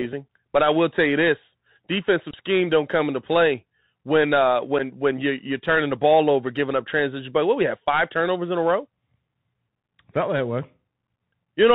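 Throughout the speech, the Bluetooth CVSD headset codec is plainly audible. Nothing above 4 kHz survives, s sounds come out scratchy, and a granular hiss sits under everything. This is the one-bit, adaptive-step encoding that fits a 64 kbps narrowband link.

From 4.79 to 4.81 s, between "into play when uh" and "when you you're turning", there is unconcealed Bluetooth headset packet loss. About 7.5 ms of audio, roughly a single packet, drops out and is not filled in. The result is a brief hole with hard edges and a short dip in level.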